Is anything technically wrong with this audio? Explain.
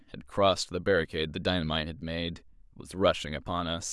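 No, there's nothing technically wrong that I can hear in this speech recording.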